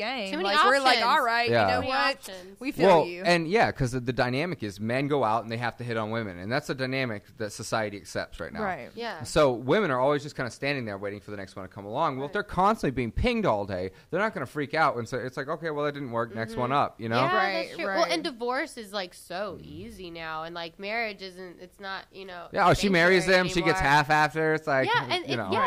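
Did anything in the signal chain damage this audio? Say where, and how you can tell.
Yes, there's grainy distortion throughout that tracks the sound, about 45 dB down. It's likely low bit depth without dither from sample-format conversion rounding to 10 bits.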